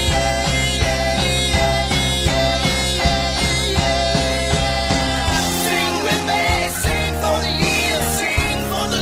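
At 4.94 s a call bitrate drop sets in and lasts to the end. The encoder is forced to code far more coarsely and trims the high frequencies, so the sound turns rough and muffled, consistent with a fall from roughly 128 kbps to about 14 kbps.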